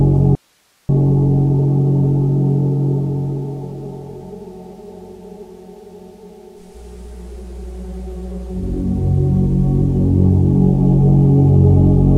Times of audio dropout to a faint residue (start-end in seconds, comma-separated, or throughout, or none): 0.35-0.89